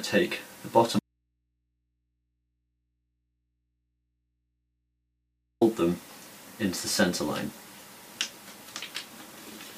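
At 0.99 s the sound drops out abruptly to faint mains hum, far below the signal, until 5.61 s. It's likely an audio dropout to a faint residue, with the open input still live.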